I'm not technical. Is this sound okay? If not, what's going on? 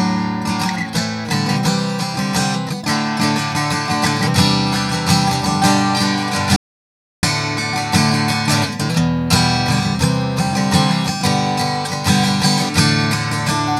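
No. At 6.56 seconds the sound cuts out completely until 7.23 seconds, about two-thirds of a second of total silence with no background hiss at all. That is an audio dropout to silence, most likely a brief loss of the input signal, and whatever happened during that gap is lost.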